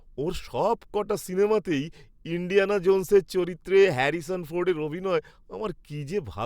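No faults can be heard anywhere in the recording.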